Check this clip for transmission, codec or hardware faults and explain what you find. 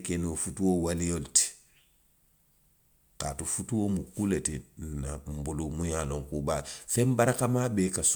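No transmission, codec or hardware faults are audible in this speech clip.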